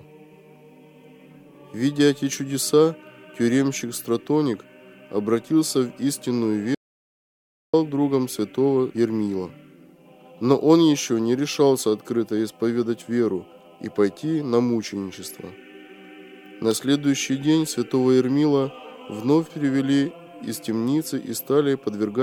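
At 6.75 s the sound drops dead for just under a second, to 7.74 s. It's an audio dropout to silence, likely a lost input writing silence, no room tone.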